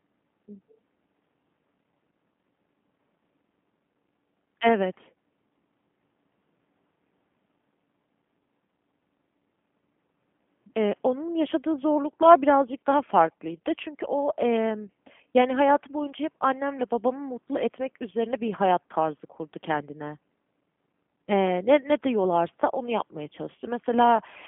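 From start to finish the speech sounds thin, slightly rough and synthetic, with nothing above about 3.5 kHz and the line band sitting near 150 Hz to 3.4 kHz. This is G.729 codec damage, consistent with an 8 kbit/s G.729A link rebuilding speech from a coarse vocal-tract and pitch model.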